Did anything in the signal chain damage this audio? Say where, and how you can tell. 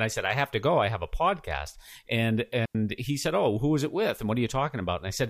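Yes. At 2.65 s, right after "have a podcast and", the speech drops into a clean hole of near silence for about 95 ms, with no noise burst at either edge, before "he said" resumes. That is a digital wireless dropout: the radio link lost too much data, so the receiver muted rather than pass corrupted audio.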